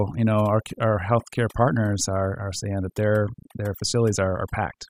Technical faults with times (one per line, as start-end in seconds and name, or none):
0.00-4.90 overdone noise removal